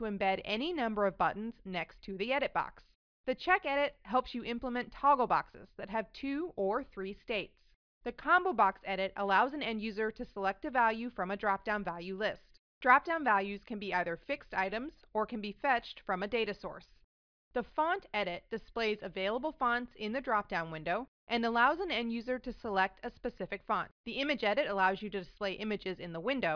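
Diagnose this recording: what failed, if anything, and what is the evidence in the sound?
Nothing stood out on listening that would point to a failure at any stage of the chain.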